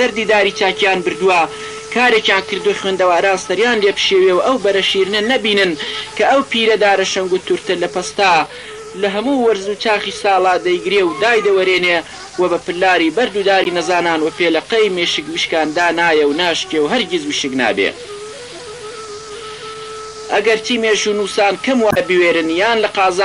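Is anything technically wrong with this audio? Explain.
Yes. Throughout, the sound is watery and swirly, with dulled treble and metallic chirps on sharp high content. This is likely MP3 compression, consistent with a bitrate around 64 kbps, starving weak frequency lines and cutting the top end.

At 13.63–13.67 s and 21.88–21.97 s, brief glitches are heard, typical of damaged data in a compressed stream, where the decoder loses sync and jumps to the next frame.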